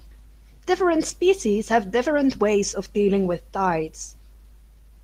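Across the whole speech clip the tempo never settles: tiny skips and unsteady pacing recur at uneven intervals, as if the talker keeps lurching ahead by a fraction. This is clock drift between sender and receiver. The sender's audio clock runs roughly four percent faster than the receiver's, so audio arrives a little quicker than it can be played out. The jitter buffer keeps filling up, and the receiver has to shed material to stop it overflowing.

From 0.04 s to 4.98 s those small hiccups are repeated timing corrections. Short slivers of audio are dropped again and again, always in the same direction, so the delivery runs at 104 percent speed with a faintly uneven gait rather than a smooth speed-up. Each individual cut is small and easy to miss.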